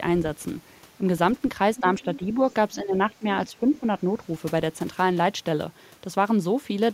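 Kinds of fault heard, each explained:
speech suppressed in double talk: The speech dips in short pieces at about 1.8 s, 2.0 to 2.38 s, 2.76 to 3.27 s and 3.49 to 3.95 s. The deepest cut is about 15 dB, in the third stretch. This is likely an echo canceller turning the talker down while the far side speaks. The waveform envelope sags there, and the spectrogram bands fade.
other side's voice leaking through: A faint second voice runs under the speech from 2.02 to 2.34 s, about 20 dB below it. It is likely loudspeaker playback that the echo canceller left in the microphone signal. On a spectrogram it shows as weak, separate harmonic striations overlapping the main speech.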